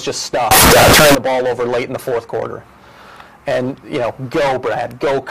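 From 0.51 to 1.15 s the audio turns into a loud, harsh, buzzing blast. The waveform becomes almost square and sits at an almost fixed, high level, whatever its level was before. Background noise rises to the same level as the main sound. This is float read as integer. The likely cause is 32-bit floating-point samples being read as 32-bit integers. Each sample's sign and exponent bits then set its value, which flattens quiet and loud passages alike.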